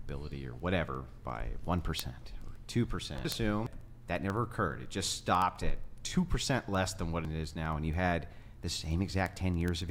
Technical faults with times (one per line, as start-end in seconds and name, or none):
0.11-9.89 word clock ticks